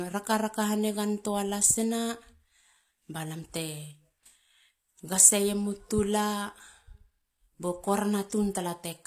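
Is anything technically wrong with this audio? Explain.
Yes. Throughout the speech, this is likely low-bitrate audio saved at a high bitrate: an earlier, heavily compressed encoding was re-saved as a larger MP3, which cannot restore the discarded detail. Its damage remains, with nothing above 14.9 kHz and the artefacts of the first pass.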